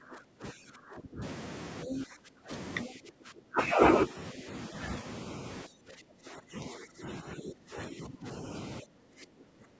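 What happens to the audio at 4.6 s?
At 4.6 s the speech is still inside a suppressed stretch running from 2.85 to 4.75 s, most likely speech suppressed in double talk. The level dips by up to about 20 dB in patches adding up to roughly a second, as the echo canceller attenuates the near talker along with the echo.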